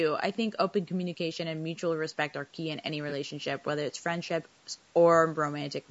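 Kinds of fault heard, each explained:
Low-delay AAC compression: The speech has a rough, grainy texture from start to finish, with noise filling the gaps between voice harmonics. The short frames of a low-delay codec such as AAC-ELD resolve pitch poorly, and this damage fits a bitrate around 32 kbps, likely from that codec. Unlike a single glitch, the roughness is constant. The band is empty above 8 kHz, which fits normal call microphone processing rather than codec loss.
AAC frame loss with concealment: At 3.09 to 3.12 s the sound briefly smears into a noisy, phasey patch. One coded frame of about 20 ms went missing, and the decoder filled the gap by reusing the last good spectrum with its detail scrambled. Because the gap is so short, the level never fades to silence. This marks it apart from a dropout, which leaves a clean hole, and from the steady graininess of the compression itself.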